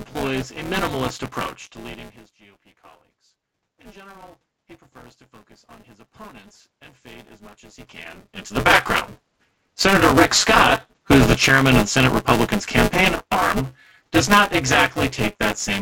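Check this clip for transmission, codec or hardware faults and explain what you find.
The speech carries one hardware fault for its whole length and two gain-control faults in the middle and later parts.

Buffer tearing runs throughout. The writing and reading positions in the output ring buffer have slipped and cross each period, so about a third of each block replays audio roughly 15 ms stale. The hard joins give a 200 Hz robotic buzz whenever there is signal, pointing to a 5 ms buffer period.

Automatic gain rising occurs from 3.77 to 9.0 s. When the input level dropped by 24 dB, the gain control slowly added 10 dB to compensate. Voice and room noise swell together over several seconds, unlike the talker's own movements near 1.5 and 7.5 s.

Automatic gain falling occurs from 9.73 to 15.0 s. Having judged the input too loud, or its background noise too strong, the gain control pulled its gain down by about 4 dB. 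The speech starts out loud and then gradually sinks, and the background noise fades down with it.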